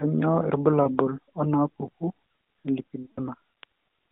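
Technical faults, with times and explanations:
0.84 to 0.88 s, lost AMR speech frame: a brief dip or warble lasting about 20 ms, the length of one frame. The decoder fills the gap by reusing the last good pitch and vocal tract settings at lower gain. Unlike a dropout or click, there is no hard cut to silence.
3.02 to 3.24 s, lost AMR speech frames: about 140 ms, which fits seven consecutive frames. The concealed sound is drawn out and fades toward silence as the gain keeps falling. The sound then returns briefly weak or rough within the narrowband line.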